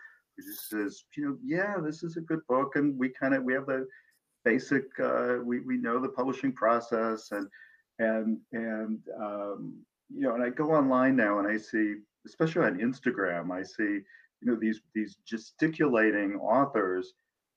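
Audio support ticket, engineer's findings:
No faults found on listening; the signal shows no audible technical defect at any point in the clip.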